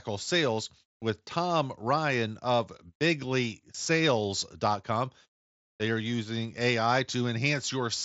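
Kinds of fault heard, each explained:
No technical faults can be heard in this speech, which comes over a Bluetooth mSBC headset link working as designed, with only the light codec graininess that path brings.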